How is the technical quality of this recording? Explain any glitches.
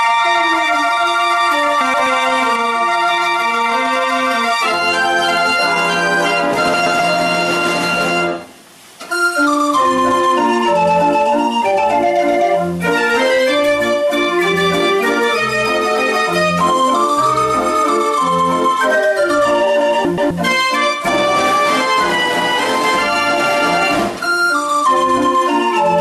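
The technical quality is compromised by two faults: constant overload and three brief scrambled passages.

Hard clipping runs through the whole recording. The signal is driven about 4 dB past what the converter or processing stage can pass, so a small share of peaks are sliced flat. The flattened tops add high harmonics, heard as crackle and grit on the loudest moments.

Frames out of order occur at 1.81 to 2.07 s, 6.74 to 7.00 s and 20.05 to 20.31 s. In each spot two adjacent 128 ms runs of frames were decoded in swapped order, which fits about four frames per run. The sound briefly flutters and garbles, and no time is lost.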